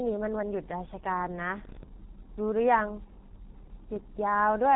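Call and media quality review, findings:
G.723.1 codec, throughout: speech muffled and hoarse, nothing above 3.9 kHz, smeared consonants. Slow 30 ms frame model, fits heavy compression near 6.3 kbit/s.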